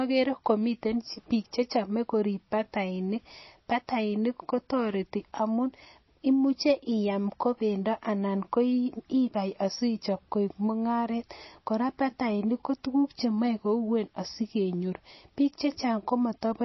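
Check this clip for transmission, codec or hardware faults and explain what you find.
There's one fault here, and it runs through the whole speech clip: MP3 compression, and it's pretty clearly audible. Nothing comes through above about 5.8 kHz, so the top end sounds dull. There's also a watery, swirling quality on the consonants, especially the s sounds. That's likely a low-bitrate MP3 encode, somewhere around 24 kbps by the sound of it. The encoder ran short of bits, chopped the treble at a fixed point, and kept dropping weak frequency lines in and out from frame to frame.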